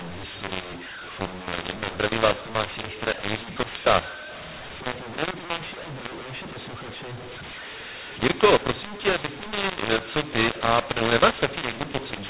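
From start to finish the speech has a mu-law and A-law mix-up: samples coded with the G.711 mu-law curve are expanded with the A-law curve, so every level maps to the wrong value. The speech sounds harsh and gritty, and pauses fill with hiss. On a waveform, quiet stretches sit visibly above zero and peaks are unevenly scaled. A spectrogram shows broadband noise smeared up to the 4 kHz telephone ceiling throughout.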